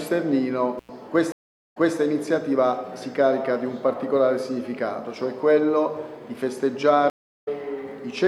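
At 0.78 s an intermittent contact, a loose connection briefly opening, cuts the sound out for about 97 ms, with crackle at both edges until 0.90 s. At 1.32 s the stream connection drops and a stream reconnect follows. After 423 ms of silence, a fresh decoder resumes the audio 235 ms earlier, so that stretch repeats, by 1.98 s. A second stream reconnect at 7.10 s gives 354 ms of silence, then the audio picks up roughly 0.3 s later, skipping ahead, by 7.48 s.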